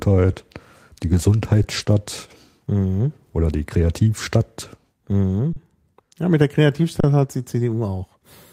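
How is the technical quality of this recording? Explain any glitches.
The recording has three kinds of glitches, bunched up around 1.6 to 1.9 seconds with a few more later.

Underrun with held sample at 1.63 s, 5.53–5.56 s, and 7.00–7.04 s right after "mit der": the buffer ran dry, so the output froze flat for about 11 to 32 ms. The first one fits a 512-sample buffer. Nothing was skipped, so each resumes fairly softly.

Lost packets rebuilt from error correction at 1.77–1.83 s, 1.88–1.90 s and 7.19–7.25 s: low-bitrate backup copies filled 40, 20 and 40 ms, so there's no gap, just a briefly rougher, noisier texture.

Short concealed packet loss at 1.85–1.88 s: about 20 ms never arrived in time, and the decoder stretched the preceding sound over the gap before blending back. You hear a quick smear or wobble.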